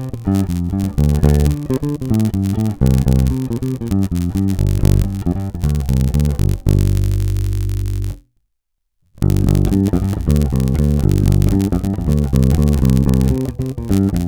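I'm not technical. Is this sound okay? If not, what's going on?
No. A low buzz of about 92 pulses a second runs throughout: a block size mismatch (padded), where tiny silent gaps fill each chunk, making it barely slower.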